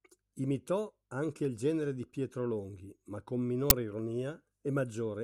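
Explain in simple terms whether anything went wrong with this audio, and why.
At 3.70 s, after "ma con", an uninitialised buffer played leftover memory instead of audio, causing a brief, loud digital noise burst that fits a 512-sample block.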